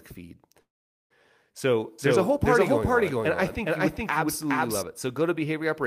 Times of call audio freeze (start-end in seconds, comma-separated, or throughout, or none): 0.61-1.12